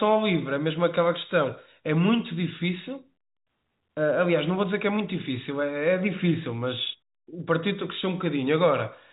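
Nothing here counts as a fault: the speech arrives through ordinary G.711 telephone coding, so the band simply stops at about 3.8 kHz the way a landline call does, and that's all there is to it.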